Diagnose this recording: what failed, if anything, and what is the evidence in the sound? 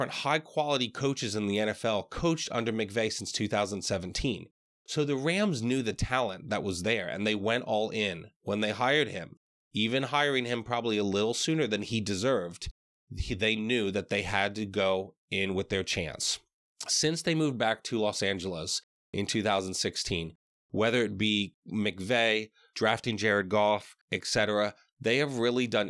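Nothing failed: no stage from the analogue wiring through to playback leaves any audible fault in the speech.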